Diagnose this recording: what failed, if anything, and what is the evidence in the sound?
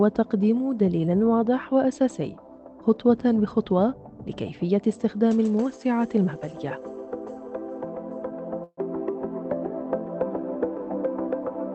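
Network stage. A call audio freeze runs from 8.63 to 8.80 s: a fading fill, then silence. Delayed packets likely emptied the jitter buffer.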